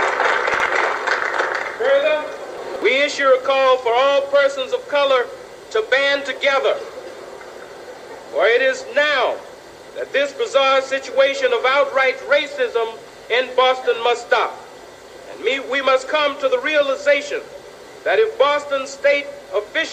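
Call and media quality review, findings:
Chunks out of order at 0.54–0.66 s and 2.58–2.82 s: brief jumbled stretches with hard joins. 60 ms chunks played late, by one chunk then three. Likely jitter-buffer or write-path reordering. Unlike packet loss, no audio is missing, only misplaced.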